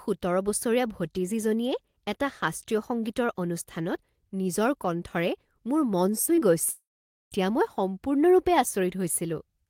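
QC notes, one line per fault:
6.25 to 6.43 s: short concealed packet loss, three gaps in quick succession just after "মোৰ মন", at 6.25 to 6.29, 6.35 to 6.39 and 6.39 to 6.43 s. Each loses about 20 ms of the call, which the receiver patches by extending the preceding sound from its pitch or as shaped noise, then crossfading back. The result is a brief smear and flutter across this stretch, with the two back-to-back gaps running together into one longer wobble.
6.69 to 7.33 s: long network dropout, ending just before "মই সম্পূৰ্ণৰূপে". Roughly 0.62 s of audio is missing. The receiver first carries the last sound on as a fading buzz or hiss, and after that about 0.48 s of near silence remains before real audio resumes. The sound picks up further along, with the lost section simply absent, likely an interruption in packet delivery on the network path.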